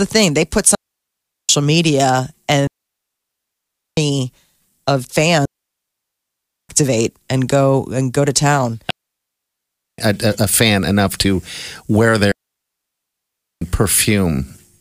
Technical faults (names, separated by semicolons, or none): digital wireless dropout